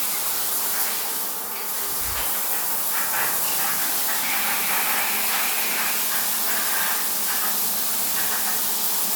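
Listening through this recording of sounds, nothing stood out as a technical problem.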